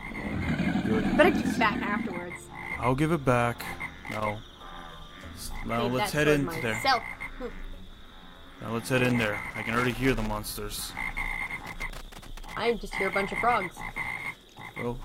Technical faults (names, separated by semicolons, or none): loose connector crackle